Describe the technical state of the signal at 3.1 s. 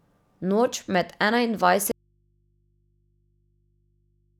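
At 3.1 s the speech is gone and only a low mains hum remains, sitting roughly 40 dB below the normal signal level. This is an audio dropout to a faint residue that begins abruptly at 1.92 s and runs to the end of the clip. The likely cause is a break in the wanted signal while the downstream path stayed live, so the open input picks up hum instead of falling to silence.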